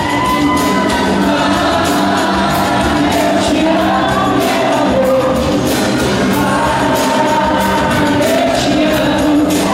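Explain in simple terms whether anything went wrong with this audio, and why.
Loose connector crackle appears at 8.49 to 8.56 s, a short, ragged burst of crackling lasting about 70 milliseconds. It comes from a worn or dirty contact somewhere in the cable or plug. When that connection shifts even slightly, it loses and regains contact many times in quick succession. Each break chops the sound, and each reconnection can snap with a small pop. The result is the irregular scratchy noise heard there.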